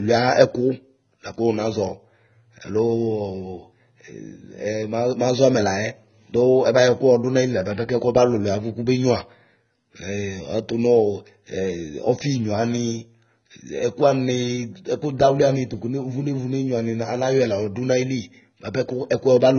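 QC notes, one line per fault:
Throughout, AAC compression: speech sounds dull and smeared, with warbling, fizzy sibilants and nothing above 6.6 kHz. This is likely heavy low-bitrate AAC-LC coding, consistent with about 16 kbps.
0.44–19.54 s, clock slip clicks: faint, regular ticks roughly every 0.4 s, likely from single samples slipping between two unsynchronised clocks about 50 ppm apart.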